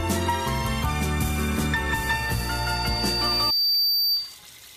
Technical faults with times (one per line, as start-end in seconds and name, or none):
2.03-4.37 loudspeaker feedback squeal